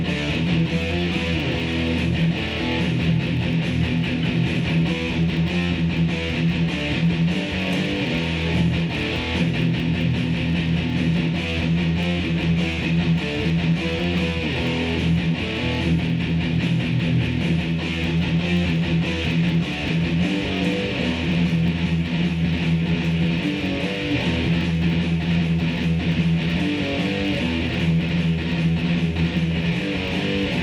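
A block size mismatch (truncated) runs throughout: one stage discards the tail of each block, leaving a steady 100 Hz buzz while the sound keeps its normal speed and pitch.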